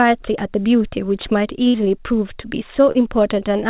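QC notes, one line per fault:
1.68–1.76 s, burst of packet loss: about 60 ms of consecutive audio never arrived in time to play. The receiver stretched the last good sound across roughly 57 ms of the gap and faded it down as the hole lengthened, so the sound there turns into a held, dimming tone or hiss rather than a clean cut. Playback then picks up further along, with the lost stretch simply skipped.
2.92–2.97 s, short concealed packet loss: a hole of about 20 ms was covered by roughly 28 ms of synthesized continuation, built from the preceding sound's pitch or spectral shape, then crossfaded back into the real signal, with about 4 ms of genuine audio dropped in the blend. It comes across as a brief smear or wobble, all within a band that stops at 4 kHz, as expected from a narrowband call codec such as G.711 A-law.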